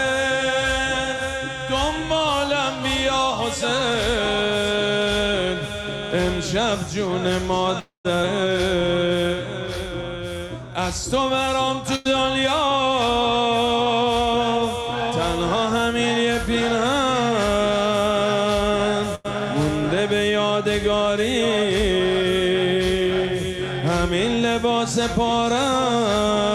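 At 7.79 s the audio stalls for about a quarter of a second, until 8.07 s, most likely a call audio freeze: incoming packets were held up and the jitter buffer ran dry. The last sound is stretched into a fading buzz or hiss that falls to silence for about 130 ms. When the packets arrive, the audio carries on from where it stopped, with nothing lost but a 252 ms gap inserted.

Between 8.23 and 8.25 s a stretch of audio is dropped while later audio is already queued: a skip ahead. Playback jumps forward, losing roughly 70 ms, and the two sides meet almost seamlessly, so the sound seems to lurch forward slightly.

From 8.76 to 9.29 s the jitter buffer builds up a reserve by repeating short pitch-period-sized pieces. This jitter buffer slow-down adds 51 ms, so this half-second plays at 91% speed at unchanged pitch, sounding drawn out.

At 11.96 to 12.07 s and again at 19.15 to 19.26 s, a burst of packet loss occurs: about 100 ms of audio never arrives in time. 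Each time, the receiver holds the last sound for 93 ms, fading it as a buzz or hiss, then resumes further on with that stretch missing.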